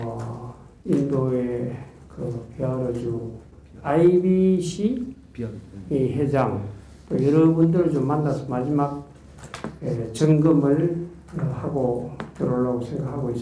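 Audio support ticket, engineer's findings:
No audible faults found on review. Nothing in the clip needs follow-up.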